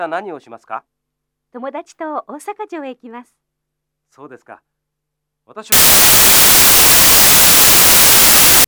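From 5.72 s to 8.64 s the audio collapses into loud broadband noise, a case of samples built from the wrong bytes. The reader is stitching each sample's bytes together wrongly, so the jittery low bits end up dominating every value. That's why it sounds like a harsh, broadband hiss.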